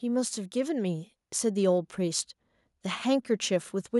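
From about 0.05 s to 2.3 s there's an automatic gain rising fault. The AGC decided the input was too quiet and kept nudging its gain up, ending about 4 dB louder over those two-plus seconds. Since it's one gain stage acting on everything, the speech and the background noise swell together. You hear a slow, steady lift in level rather than a jump, with the room tone climbing right alongside the voice.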